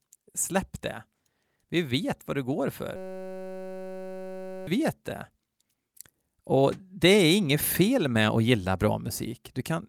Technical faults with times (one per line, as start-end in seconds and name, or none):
2.96-4.67 system hang loop